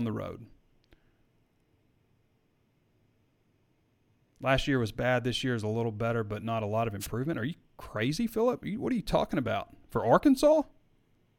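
At 7.00 to 7.08 s a wireless microphone noise hit interrupts the speech: the FM radio link fades, so receiver noise swells into a brief swish of static lasting about 80 ms. A spectrogram shows a short broadband smear over the speech harmonics, and the waveform shows a dense, noisy patch.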